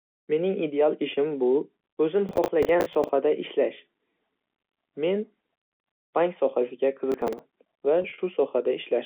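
Processor overload crackle at 2.29–3.09 s, just after "ideal ishim bu o'zim", and again at 7.12–7.39 s after "bank sohasiga", tears through this telephone-band speech recording as gritty bursts. Buffers of roughly 10 ms miss their deadlines repeatedly, about twenty times and then about seven, and each gap is refilled with stale audio. Packet loss with pitch repetition at 8.02–8.18 s loses 80 ms scattered over 160 ms, with gaps no longer than 40 ms, which fits about four dropped packets. Each gap is bridged with a briefly held, buzzy repeated pitch period.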